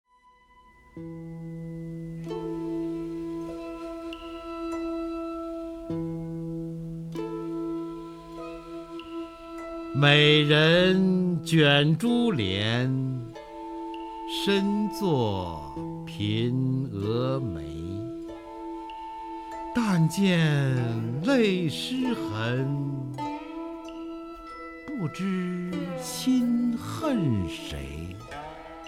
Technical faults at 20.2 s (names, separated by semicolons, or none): none